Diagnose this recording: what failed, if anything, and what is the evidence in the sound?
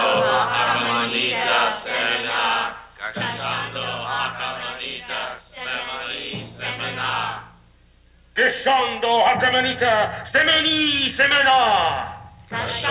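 Nothing in the recording has failed. It went through a call path that carries no content above 4 kHz, which fits a narrowband telephone codec such as G.711 mu-law at 64 kbps.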